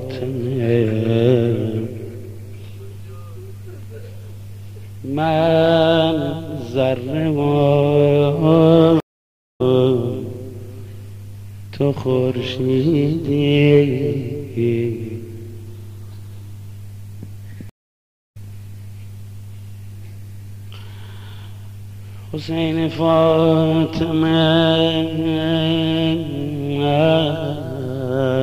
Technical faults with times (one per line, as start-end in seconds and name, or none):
9.00-9.61 stream reconnect
17.69-18.37 stream reconnect